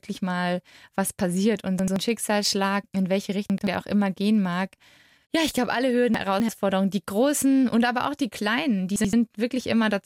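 Chunks out of order garble the speech at 1.79–1.96 s, 3.50–3.67 s, 6.14–6.49 s and 8.96–9.13 s. Each time, an 85 ms block plays after the block that should follow it, late by one block and by three at 6.14 s. There are three hard joins, and the sound briefly jumbles. Unlike a dropout, nothing goes missing or silent. The same material simply arrives in the wrong sequence.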